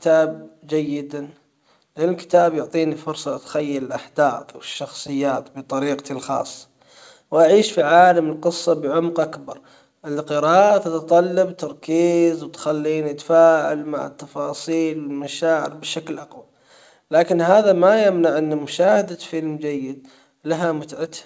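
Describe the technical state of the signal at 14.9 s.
At 14.9 s short pieces of the speech are being doubled, small enough that any hiccups or unevenness in pace are slight. These are repeated timing corrections, running from 0.12 s to 21.03 s, playing the audio at about 97% speed and adding roughly 0.7 s overall. They come from clock drift between sender and receiver: the sender's clock runs about 3% slow, so the jitter buffer keeps draining and the receiver fills the gap by repeating fragments at irregular intervals. The G.722 call path carries nothing above 8 kHz.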